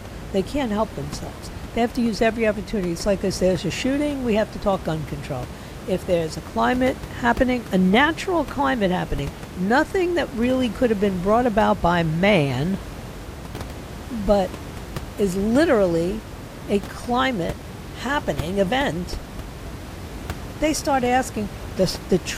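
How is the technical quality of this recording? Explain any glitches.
No technical faults are audible.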